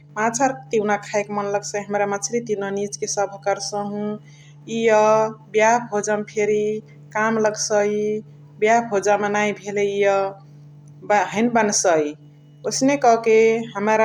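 No technical faults can be heard anywhere in the speech recording; the signal holds steady throughout.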